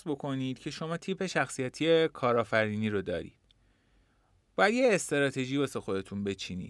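Speech recording, no technical faults detected anywhere in the clip.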